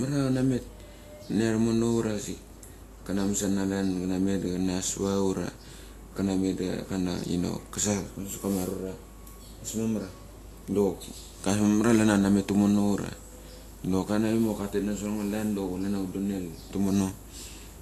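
Speech that has likely been through Vorbis compression at a low rate, around 36 kbps, leaving the whole clip hissy and grainy, with coarse treble and softened onsets.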